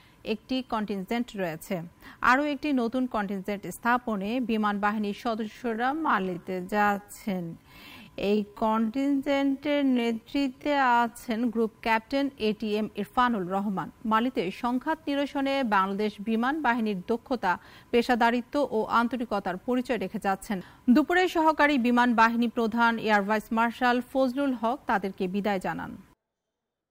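From 5.38 s to 11.30 s there is a time-stretched section. The pace drops abruptly to about 0.55 times normal while pitch holds steady. Software likely lengthened this part by repeating short pieces, so the sound drags.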